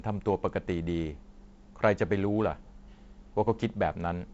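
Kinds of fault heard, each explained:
No kinds of fault are heard in this speech clip, which comes through G.722 wideband telephone coding at 48 kbit/s with nothing above about 7.7 kHz.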